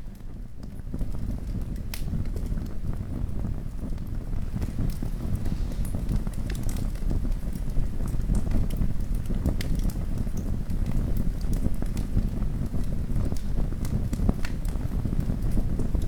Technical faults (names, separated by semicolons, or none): none